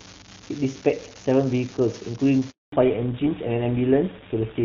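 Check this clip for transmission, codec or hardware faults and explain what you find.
Three faults are present in this speech clip: a constant crackle, a brief dropout, and a loss of treble in the second half.

Throughout, a steady fizzing crackle runs under the speech and persists in pauses. This is an unreliable data bit: one marginal data line flips a bit at random, producing identical spikes.

From 2.50 to 2.72 s the voice fades and goes silent for 220 ms. This is a handover gap: the call switched networks and no speech frames arrived during the transfer.

From 2.72 s to the end the voice sounds duller and rougher, with nothing above 4 kHz. This is fallback to narrowband, as the call dropped from clean AMR-WB HD Voice at 23.85 kbit/s to GSM full rate at 13 kbit/s.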